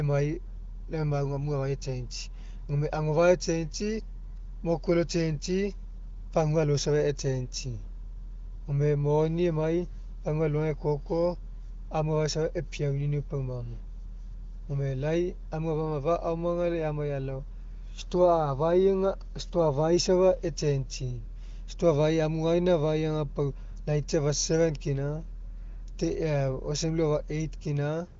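No technical faults occur anywhere in the clip, and the AMR wideband (HD Voice) path at 23.05 kbit/s leaves nothing above about 7.2 kHz.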